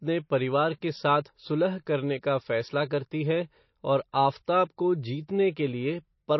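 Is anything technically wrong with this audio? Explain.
Yes. Throughout the speech, the sound is watery and swirly. Nothing remains above 5.8 kHz, which fits likely MP3 compression at a starved bitrate of around 27 kbps. Short of bits, the encoder chops the treble and drops weak frequency lines frame by frame. A spectrogram shows a flat ceiling at 5.8 kHz with flickering gaps beneath.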